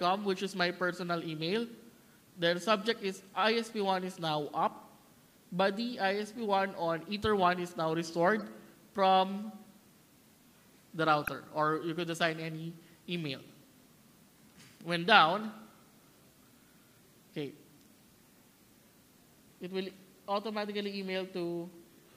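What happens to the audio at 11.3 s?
A brief chirpy burst of noise, peaking around -15 dBFS, from 11.22 to 11.28 s: a corrupt frame decoded, where a few damaged compressed frames were played with misread codes.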